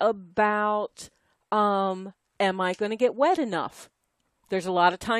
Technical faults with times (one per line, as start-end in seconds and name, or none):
2.38 overlap between stream segments